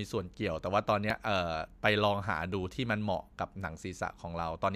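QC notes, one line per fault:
0.66–1.25 s, CD scratch ticks: five short clicks on the speech, about seven or eight a second, none lasting more than a millisecond or two. The evenly spaced rhythm points to a scratch or blemish passing the laser once per disc turn. Each pass wipes out more data than error correction can rebuild, so the player patches or mutes a tiny stretch of samples, and that gap comes through as a tick.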